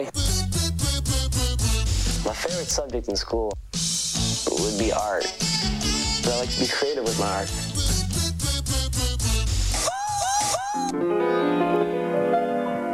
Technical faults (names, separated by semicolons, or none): word clock ticks